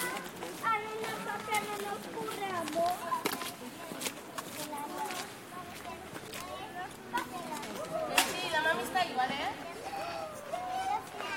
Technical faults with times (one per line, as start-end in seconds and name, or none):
7.62 stream segment skipped